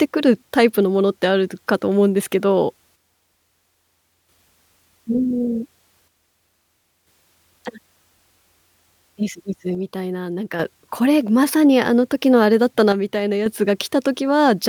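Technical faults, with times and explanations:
2.96–4.29 s, 6.08–7.07 s, 9.75–10.60 s and 12.92–13.46 s: one channel drops out. The speech level falls abruptly by about 6 dB and recovers, likely because one stereo channel is lost before the mono sum.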